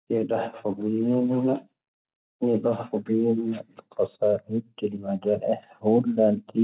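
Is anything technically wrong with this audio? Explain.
Yes. Automatic gain rising begins at 5.23 s and continues to the end of the clip at 6.63 s. The gain control judged the incoming level too low and steadily increased its amplification, so the speech and the background noise swell together over that last stretch rather than the speech alone getting louder. The audio passes through a narrowband call path, with nothing above 4 kHz, which fits a standard telephone codec such as G.711.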